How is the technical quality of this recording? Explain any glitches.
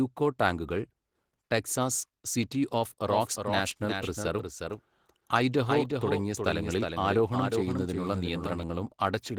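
Technical quality is fairly rough, with two distinct problems.

The whole clip carries Opus voice compression at 16 kbps in hybrid mode. The coarse low-rate coding leaves the speech muffled, slightly hoarse and a touch robotic.

From 3.07 to 8.63 s there's a doubled audio track. A dry, slightly quieter copy trails about 0.4 s behind, starting and stopping abruptly, likely from a second, slower capture path.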